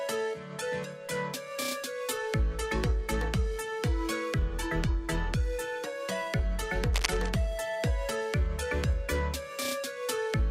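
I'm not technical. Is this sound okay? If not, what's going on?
No, there's one problem. From about 6.93 to 7.30 seconds you'll hear a short burst of scratchy, rustling noise sitting on top of the sound, nearly as loud as the sound itself. That's cable scratch noise. It's likely from a worn cable, plug or knob being moved: the electrical contact flickers rapidly between good and bad, and each flicker adds a little crackle, so together they come out as that rough scratch.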